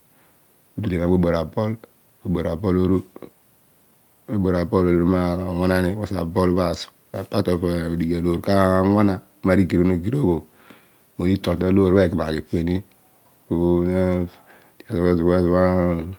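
No technical faults are audible.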